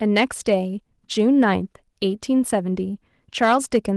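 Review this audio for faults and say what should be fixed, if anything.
Hard clipping appears twice in this speech, from 0.17 to 0.54 s and from 3.42 to 3.77 s. The level there runs about 4 dB beyond what the stage can pass, so peaks are sliced flat and heard as a gritty crackle on the loudest syllables. On a waveform the tops sit pinned against a ceiling; a spectrogram shows bright vertical streaks of added harmonics climbing high above the speech band. The light Opus coding at 24 kbps doesn't hide it. Lowering input gain by at least 4 dB, or placing a limiter before the overloading stage, would prevent it.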